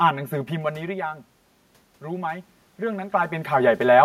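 Channel delay (comb filtering) runs through the whole clip. One channel arrives around 5 ms behind the other, and when the two are folded to mono, anything common to both cancels at regularly spaced frequencies. The lowest notch sits near 100 Hz, with further notches roughly every 200 Hz above it. That fixed pattern of holes gives the speech a hollow, phasey colour that never moves.

Automatic gain rising follows from 2.0 s to 4.0 s. The level reaching the gain control drops by about 12 dB. The control judges the input too quiet and lifts its gain by about 4 dB over those two seconds. Voice and room noise swell together as a slow upward creep in loudness, without the abrupt jump a manual adjustment would produce.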